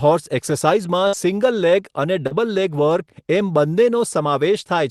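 A speech clip carried over a WebRTC call path, with the band stopping near 12 kHz as an Opus stream at a modest bitrate would. From 1.07 to 1.15 s a burst of packet loss is heard: about 55 ms of the last sound is stretched into a fading buzz or hiss, then the speech jumps ahead with roughly 60 ms gone. The audible hold-and-fade and the skipped stretch set it apart from a brief glitch. At 2.27 to 2.33 s a short concealed packet loss leaves only a quick smear or wobble, about 40 ms, where the decoder extrapolated the previous sound and blended back. Since it has no sustained fade, a short sound can simply seem to vanish.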